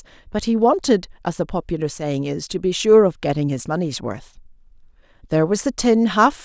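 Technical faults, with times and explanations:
No technical faults are present.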